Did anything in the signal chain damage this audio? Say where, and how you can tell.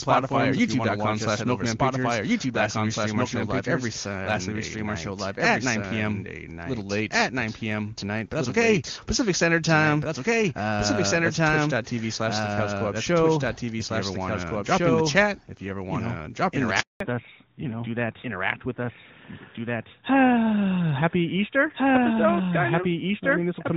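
Yes. A doubled audio track runs throughout: the speech repeats roughly a second and a half later at about equal level. The waveform shows each envelope twice, likely from a second, slower capture path.

At the network stage, a handover gap from 16.80 to 17.00 s silences the audio for 200 ms. The sound dies quickly, leaving a flat waveform and an empty spectrogram column.

A fallback to narrowband follows from 17.00 s onward, moving the codec from HD Voice to narrowband. The spectrogram's upper band above 4 kHz disappears abruptly, and the audio sounds duller and rougher.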